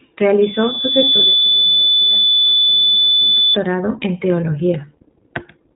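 The whole clip passes through the iLBC codec. Nothing above 4 kHz survives, so the speech sounds narrowband and boxy. The damage is plainly audible, with a rough, slightly synthetic edge. Each short frame's excitation is coded on its own. The roughness fits the 15.2 kbps mode with 20 ms frames.

At 0.42 s a loudspeaker feedback squeal begins. A microphone is picking up the loudspeaker it drives. At 3.5 kHz the loop gain tops one, so that tone feeds itself. It swells over about a second until it stands above the speech. It is a single piercing whistle. It stops at 3.57 s, when the loop is broken.

From 1.38 to 1.43 s, under the squeal, there are lost iLBC frames. The decoder fills the 40 ms gap by repeating the last pitch cycle mixed with noise. That fits two missing frames. It sounds like a brief held, buzzy vowel. The speech snaps back almost at once. Each iLBC frame decodes without the one before.

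A second dropout runs from 2.95 to 2.97 s. This 20 ms gap fits a single lost frame. It gives a shorter buzzy blip before the speech recovers.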